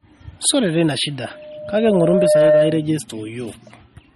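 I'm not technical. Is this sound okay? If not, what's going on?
No. Two things are wrong with this speech clip.

Throughout, the voice sounds watery and dull, with nothing above about 12.4 kHz. That points to heavy MP3 compression, likely because the file was squeezed very small. To save space, the encoder threw away the treble and much fine detail.

From 1.31 to 2.90 s there is a loudspeaker feedback squeal. The microphone picked up its own loudspeaker, and one tone at 606 Hz kept feeding itself. It swells over about a second until it is a little louder than the voice, then stops.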